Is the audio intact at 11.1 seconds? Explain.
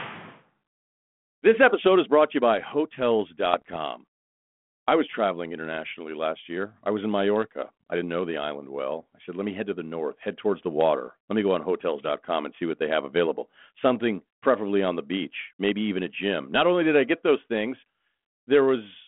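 No. Bit errors on an ADPCM link hit at 11.07 s: flipped bits upset the 32 kbit/s G.726 decoder's step size and predictor, so the damage rings on for some milliseconds and is heard as a sharp pop with a rough, brief jump in level.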